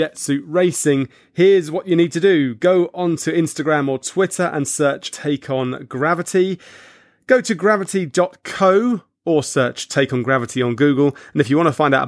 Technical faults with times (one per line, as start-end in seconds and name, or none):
none